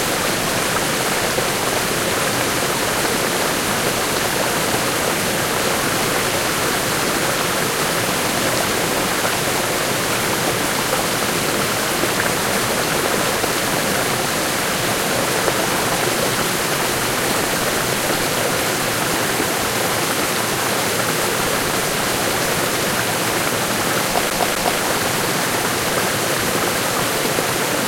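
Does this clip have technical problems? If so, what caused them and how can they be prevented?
Yes. From 24.30 to 24.81 s there is a CD stuck on one turn. A scratch throws the laser back a track, so one 0.25 s slice plays twice with a brief mute at each jump. On a waveform it shows as identical blocks split by thin silent gaps. Cleaning or replacing the disc prevents it.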